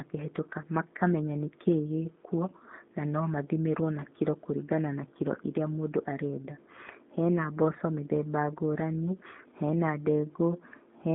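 G.729 codec damage runs from start to finish, and it is plainly audible. The speech has been squeezed into a 200 Hz to 3.7 kHz line band with nothing above 3.8 kHz, and then rebuilt from a vocal tract filter, a pitch predictor and a few pulses in each 10 ms frame. The result, which fits an 8 kbit/s G.729A coder, is intelligible but dull, slightly rough and synthetic, with a buzzy, modelled quality.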